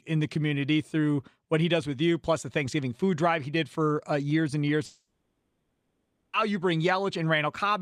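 Speech clip with a long network dropout from 4.85 to 6.35 s, right after "uh years and years". The last sound trails off as a fading buzz, then roughly a second of silence. Audio resumes at "you bring" with those 1.5 s lost, likely from packets that never arrived.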